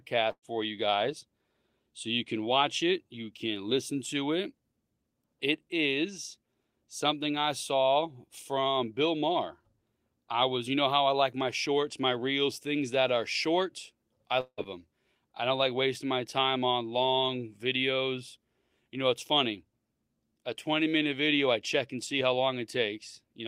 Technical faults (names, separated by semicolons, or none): burst of packet loss; long network dropout